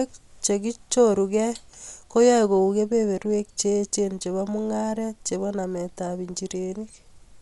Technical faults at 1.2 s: Dolby Digital compression

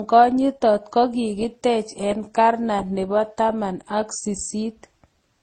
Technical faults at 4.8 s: transcoding between lossy codecs

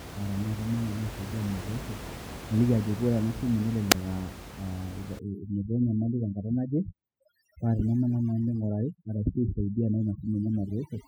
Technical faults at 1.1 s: none

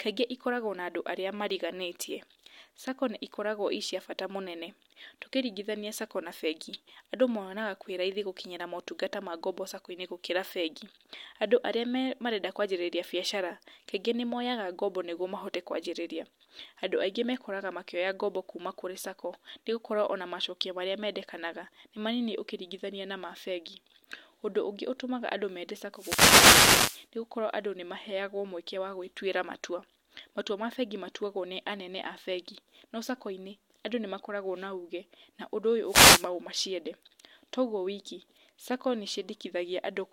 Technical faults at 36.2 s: wireless microphone noise hit

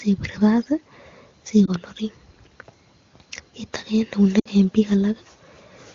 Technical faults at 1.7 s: lost AMR speech frames

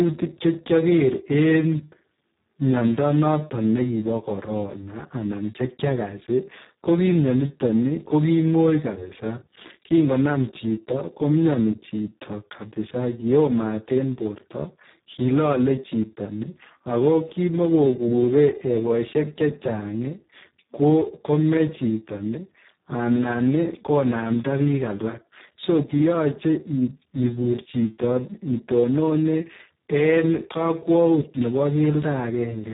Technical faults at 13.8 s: Speex codec

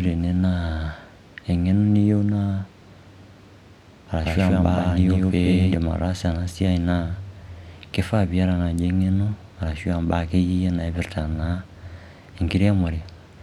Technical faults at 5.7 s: doubled audio track

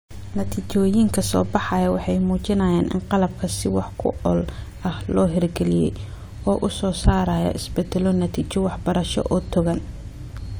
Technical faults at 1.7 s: none

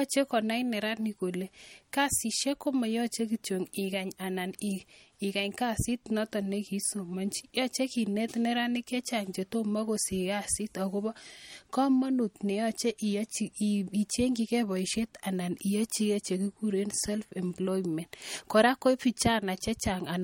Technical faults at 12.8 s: MP3 compression

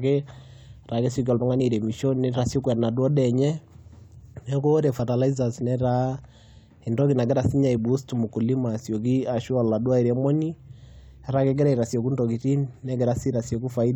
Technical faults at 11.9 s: damaged data in a compressed stream

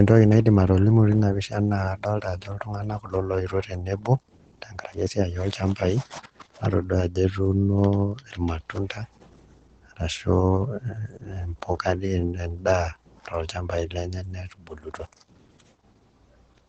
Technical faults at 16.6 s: Opus voice compression

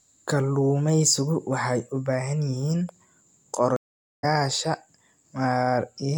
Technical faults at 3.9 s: stream reconnect

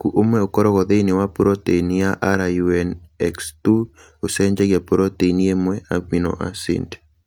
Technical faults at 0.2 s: none

